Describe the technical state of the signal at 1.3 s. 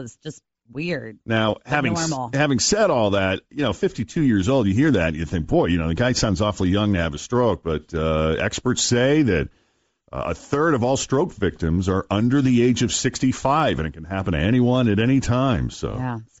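At 1.3 s the signal has most likely passed through Bluetooth LC3 compression, and this holds for the whole clip rather than just that moment. The transform codec is starved of bits, so much of the upper spectrum is discarded and replaced with synthetic noise. The damage is plainly audible: the speech takes on a breathy, grainy edge in its upper range. That degree of loss fits a low rate around 32 kbps with short 7.5 ms frames.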